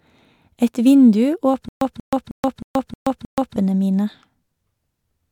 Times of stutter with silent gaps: 1.69-3.56

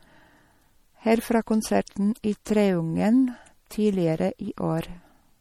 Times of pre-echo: 2.45

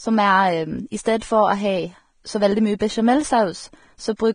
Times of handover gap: none

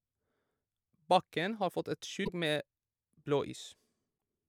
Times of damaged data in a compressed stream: 2.23-2.29, 4.14-4.17

